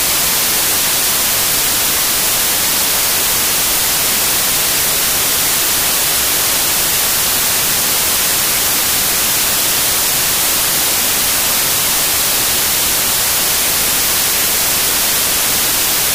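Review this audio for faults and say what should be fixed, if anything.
Samples built from the wrong bytes affect the whole clip, from start to finish: the reader assembles each sample from mismatched bytes, so the rapidly changing low-order bits land in the high-order position. The result is loud, harsh broadband noise, close to white on loud passages. To prevent it, confirm the byte order, sample width and frame alignment declared in the file header match what the decoder actually reads before processing.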